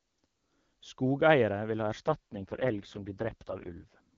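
Just after "vil ha", at 2.07 s, an AMR rate drop sets in and lasts until 4.00 s. The wideband AMR-WB coding, clear before this point, suddenly turns rough, buzzy and synthetic, which fits the codec falling from its top rate to its lowest, around 6.6 kbit/s. Unlike a switch to narrowband or a packet loss, the treble stays and nothing drops out; only the texture coarsens.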